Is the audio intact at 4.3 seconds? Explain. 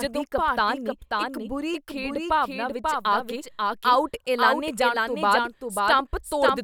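No, at 4.3 s you're hearing a doubled audio track, and it runs through the whole clip. A second, about 5 dB quieter full-band copy of the speech trails about half a second behind, with no decay or room colour. Likely a slower capture path recording the audio twice.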